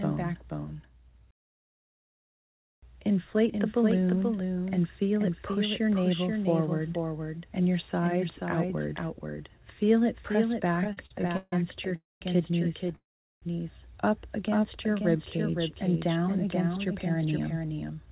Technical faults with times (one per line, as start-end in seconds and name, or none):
0.00-18.12 doubled audio track
10.84-11.53 repeated stalls (stutter)
11.96-12.22 call audio freeze
12.96-13.43 call audio freeze
14.48-15.52 jitter buffer slow-down
17.24-18.07 jitter buffer speed-up